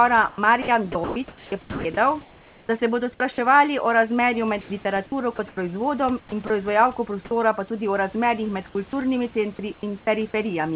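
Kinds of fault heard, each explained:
Overdone noise removal: the denoiser is pushed too hard throughout, so the background drops and breaks up into twinkly specks.
Sound chopped by the voice detector: likely the sender's detector toggling, so between 0.29 and 3.2 s, 4.61 to 5.57 s and 6.2 to 6.5 s, bits of speech flicker into comfort noise.
Sound dropped by the voice detector: at 8.9 s and 9.74 to 9.83 s the speech briefly gives way to steady comfort noise, likely because the detector mistook it for background.
Onset clipped by the voice detector: at 10.05 s a sound starts abruptly, its first 20 ms missing, likely because the detector was slow to notice sound resuming.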